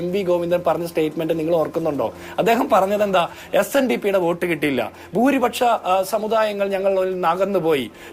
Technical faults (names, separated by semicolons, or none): none